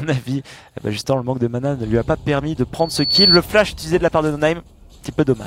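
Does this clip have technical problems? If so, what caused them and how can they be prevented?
Yes. A loudspeaker feedback squeal runs from 2.79 to 3.39 s: a single 4.4 kHz tone swells over a few tenths of a second to roughly 10 dB above the audio, because the microphone is re-amplifying its own loudspeaker output. That self-feeding swell distinguishes it from a steady interference whistle. Lower the gain, move the microphone away from or behind the loudspeaker, or notch out 4.4 kHz.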